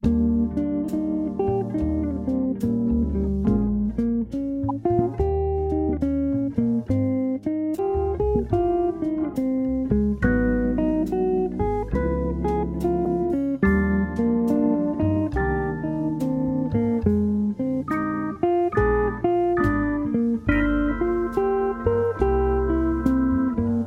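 Brief glitches at 4.69 s, from 7.75 to 7.79 s, and from 13.03 to 13.08 s point to damaged data in a compressed stream. The decoder misreads corrupted frames and resynchronises, so each is a short disturbance at that point.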